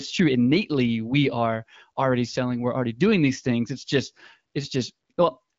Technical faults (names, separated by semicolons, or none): none